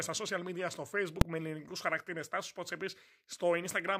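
At 1.21 s, invalid numbers at full scale: a calculation went infinite, pinning output to one extreme value for about 2.7 ms, which fits a 128-sample block, heard as a single bang.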